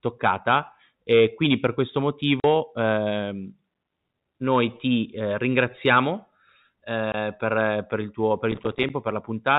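At 2.40 s, right after "e quindi per questo", the speech drops into a 40 ms hole with hard edges, and at 7.12 s a shorter 20 ms hole comes just before "per per il tuo". This is packet loss filled with silence: the receiver played nothing where packets never arrived, and the two lengths point to 20 ms packets.

From 8.52 s to 8.90 s, after "per il tuo per", a gritty crackle tears through the band-limited telephone sound. This is processor overload crackle: small buffers of around 5 ms repeatedly missed their deadline and dropped to silence, leaving many tiny hard-edged gaps.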